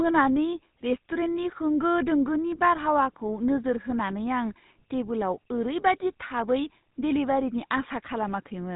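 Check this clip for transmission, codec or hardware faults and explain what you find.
One fault runs through the whole clip: GSM full-rate codec damage, plainly audible throughout. The speech carries a buzzy, gravelly roughness because the codec rebuilds it from a vocal-tract model driven by sparse, regularly spaced pulses, which fits the old 13 kbps full-rate scheme. Nothing survives above 3.8 kHz. A simple telephone band-limit would sound muffled but clean. This grainy buzz riding on the voice marks codec coding, not just filtering.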